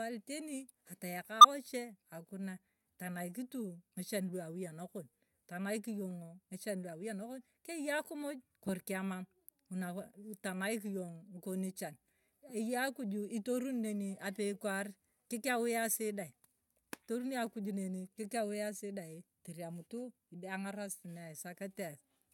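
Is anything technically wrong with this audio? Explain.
Yes. From 1.41 to 1.45 s the speech has a corrupt frame decoded: flipped bits in a few compressed frames were played anyway, so misread gains and codes put energy at wrong frequencies. The result is a sharp, fairly loud chirpy burst. A lost frame would instead bring a gap or smeared repeat, not new, foreign tones.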